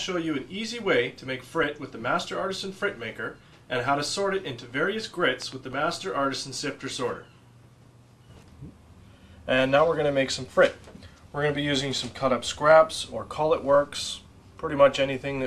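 At 5.42 s a loud pop occurs: two sharp pops in quick succession, over by 5.54 s, peaking a few decibels above the surrounding sound, which continues underneath. The likely cause is a sudden voltage pulse, from a switch or static discharge, entering the signal chain.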